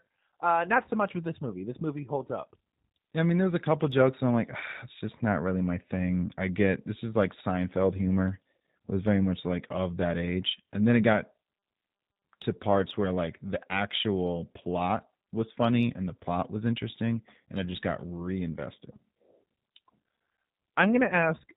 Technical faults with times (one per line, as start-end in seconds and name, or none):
0.00-21.57 G.729 codec